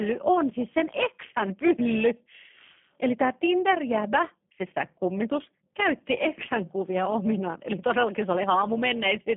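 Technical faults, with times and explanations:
Throughout, overlap-add ripple: the level pulses by about 6 dB at roughly 400 times a second. Mismatched frame overlaps create a metallic buzz with extra tones around each note.
Throughout, G.729 codec: the speech is confined to 150 Hz to 3.4 kHz, with nothing above 3.5 kHz. Plainly rough, synthetic texture suggests 8 kbit/s model-based coding.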